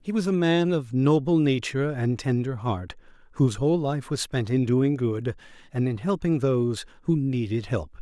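No technical faults can be heard anywhere in the speech recording.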